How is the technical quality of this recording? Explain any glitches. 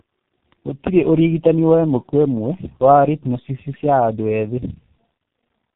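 The technical quality is poor. The speech has been through more than one low-rate coder, and there is one sharp click near the start.

Tandem speech coding runs through the whole clip. The call appears to have crossed three links, two of them with a low-bitrate speech codec. The roughness and warble fit a G.729A stage followed, after a G.711 hop, by G.723.1 at about 6.3 kbit/s. Each coder re-encodes the previous one's already degraded output, so the errors pile up. The speech sounds rough, muffled and warbly, with nothing above 3.8 kHz.

An electrical switching spike occurs at 0.52 s. It is a sharp snap lasting only a couple of milliseconds, sitting on top of the sound rather than replacing it. The likely cause is a nearby switch, motor or static discharge arcing briefly, with the audio line picking up the burst. Because it is so short, it is heard as a tight click, not a dropout.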